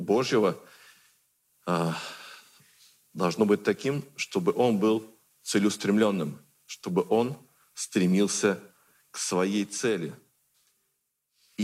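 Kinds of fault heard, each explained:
Nothing stood out on listening; no fault could be heard anywhere in the audio.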